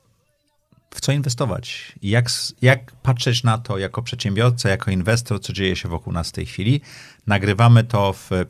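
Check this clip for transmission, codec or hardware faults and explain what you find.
No faults turn up anywhere in this speech recording. There is nothing to report for any part of the signal chain.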